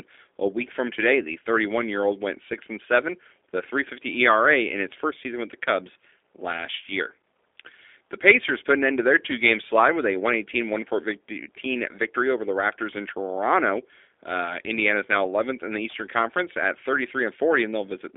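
From start to finish the speech has been through a G.729 codec, the G.729A variant at 8 kbit/s, and the damage is plainly audible. The call path limits the band to roughly 300 Hz to 3.6 kHz, so there's no low end and no air on top. Because the codec rebuilds each frame from a vocal tract filter, a pitch predictor and a handful of pulses, the voice comes across as rough and synthetic rather than natural.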